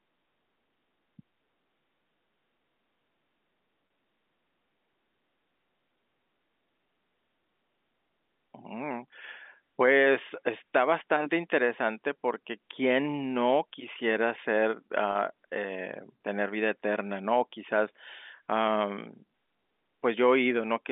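At 3.87 s and again at 15.12 s, there is packet loss with pitch repetition. Each gap lasts 30 ms, which fits one lost packet. The receiver bridges it by repeating the last pitch period. Each sounds like a brief, buzzy hold in the speech.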